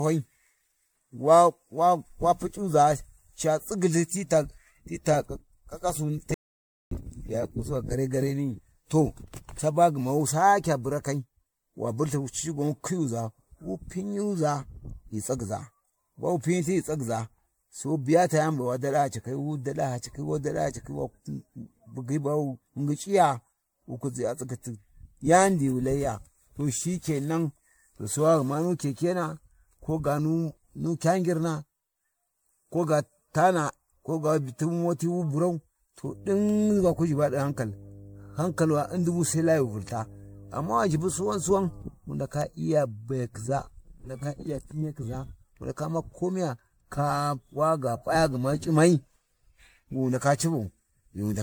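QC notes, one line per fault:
Throughout, generation loss: the speech has a swirly, smeared, hollow quality, with consonant attacks blurred and a watery churn around the voice, all well beyond what a single 96 kbit/s MP3 would produce. The likely cause is repeated MP3 decoding and re-encoding, around ten passes, each quantising on a shifted frame grid so the noise and spectral holes pile up. It differs from one low-bitrate encode, which stays steady rather than swirling. The band stops near 19.9 kHz.
6.34 to 6.91 s, audio dropout to silence: the speech cuts off mid-flow and returns about 0.57 s later. The gap is silent with no room tone or noise floor, so whatever was said there is lost. That total blankness distinguishes it from a level dip or a noise gate, which leave some background. The likely cause is the input dropping, through a disconnected device, failed link or stray mute, while silence kept being written.
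36.05 to 41.82 s, mains hum: just after "tu moti wu burau", a steady low 50 Hz tone with some low harmonics sits under the speech at about 20 dB below it for nearly six seconds. Power-line energy is coupling in, through a ground loop or nearby transformer. Its fixed pitch locked to 50 Hz and its constant level mark it as hum rather than rumble or wind, which wander in pitch and level and lack a harmonic series.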